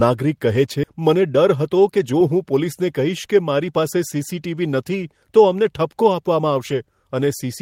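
Speech, with two delivery faults. At 0.83 s a skip ahead occurs: roughly 0.4 s of queued audio was dropped, so the speech jumps straight forward with no gap or fill. From 0.94 s to 3.29 s, jitter buffer speed-up trims short pitch-period pieces to shed around a fifth of a second of backlog, making speech run about 8% fast at unchanged pitch, hurried.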